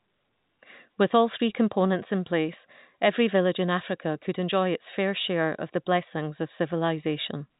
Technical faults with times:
none

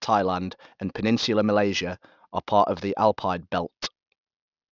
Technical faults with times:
0.00-4.71 aliasing

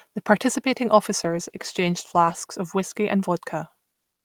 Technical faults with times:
1.24-2.43 call bitrate drop

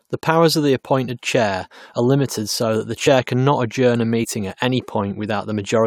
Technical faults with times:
1.07 compressed frames skipped
3.06 compressed frames skipped
4.23-4.25 compressed frames skipped

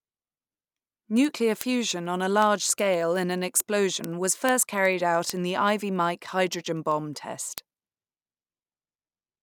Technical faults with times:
0.14-9.42 word clock ticks

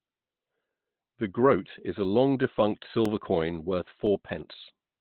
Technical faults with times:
0.00-5.00 Opus compression
1.05-4.07 periodic USB or driver dropouts

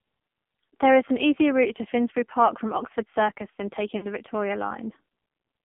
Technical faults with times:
0.00-5.64 AMR narrowband mobile codec
3.98-4.07 lost AMR speech frames

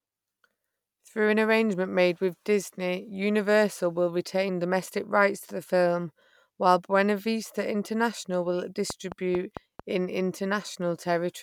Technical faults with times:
8.90-9.80 train of clicks

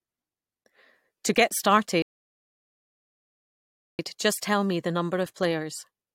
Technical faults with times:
2.02-3.99 rebuffering stall

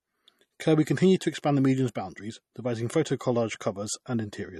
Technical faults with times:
0.00-4.60 MP3 compression

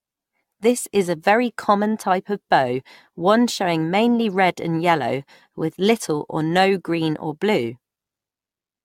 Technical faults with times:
0.00-8.85 generation loss

